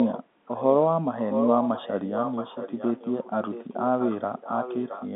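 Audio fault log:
0.0–0.2 s, 0.46–0.85 s, 1.17–5.08 s: echo leak, a distinct delayed copy of the speech 0.67 s behind the original and roughly 10 dB down (nearer 15 dB in the middle stretch), likely from a far-end loudspeaker's echo canceller letting sound through. Unlike room reverberation, it is a separate repeat, not a smear.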